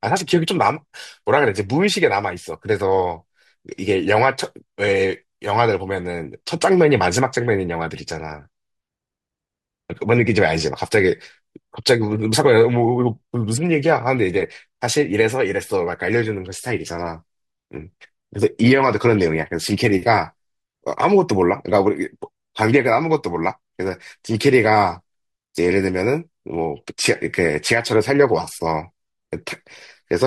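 No technical faults can be heard in this recording.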